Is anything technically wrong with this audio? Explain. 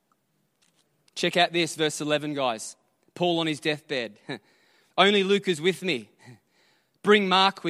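No, nothing is technically wrong with this audio.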